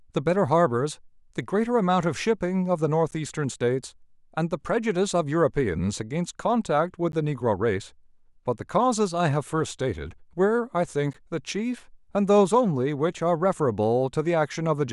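At 3.11, 7.12 and 11.13 s, a gap between chunks cuts the speech: 12 ms silences every 4 s, visible as flat waveform dropouts and clean vertical spectrogram gaps.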